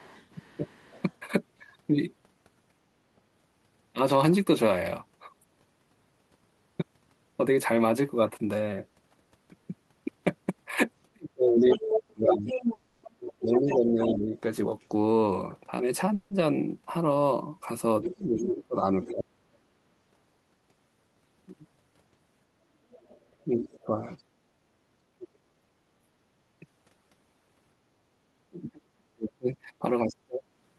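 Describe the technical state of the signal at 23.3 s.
Other side's voice leaks through from 22.91 to 23.80 s: a faint second talker about 20 dB down, likely uncancelled loudspeaker echo, visible as weak overlapping spectrogram harmonics.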